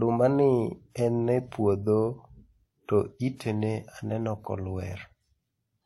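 A speech clip with transcoding between lossy codecs throughout. Two layers of compression artefacts sit on top of each other, with smeared, swirly highs over a dulled top end. This likely comes from a WMA pass at about 64 kbit/s followed by HE-AAC at about 32 kbit/s.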